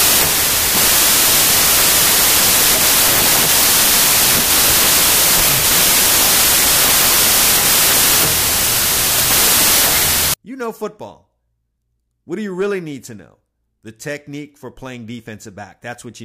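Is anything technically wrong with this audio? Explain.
Yes. From 0.0 to 10.34 s there is a wrong sample width fault, which fits packed 24-bit data read as 32-bit. Samples straddle byte boundaries, giving loud noise over buried speech running 1.33 times fast and high.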